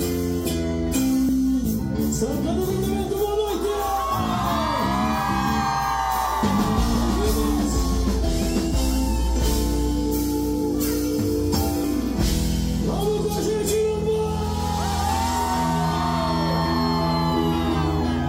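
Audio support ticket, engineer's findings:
Compressed frames skipped at 1.28 s, 2.69 s and 11.84 s. Symptom: audio jumps forward with no silence, roughly 70 ms lost at the first, roughly 100 ms at the other two, consistent with whole frames of about 26.1 ms. Probable component: decoder or file integrity, with frames missing or rejected as damaged. Unlike a dropout there is no gap, and unlike a sample-level splice the join is a soft smeared blip, not a hard click, because overlapping frames blend the edges.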